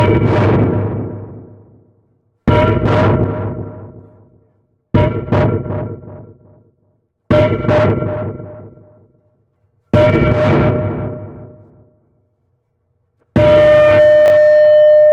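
Near the end, from 14.26 to 14.30 s, the chunks are out of order. One 20 ms block of audio was delivered or written a single chunk late, so it plays after the block that should follow it. Nothing goes missing, but the sequence is swapped and the stream now has three abrupt joins instead of continuous edges. The result is a brief jumbled stutter in the sound.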